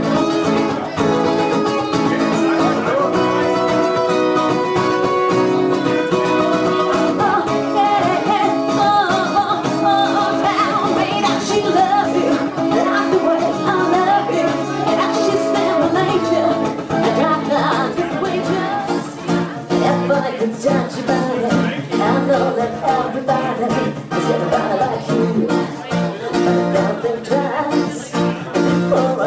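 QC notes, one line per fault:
No fault to log.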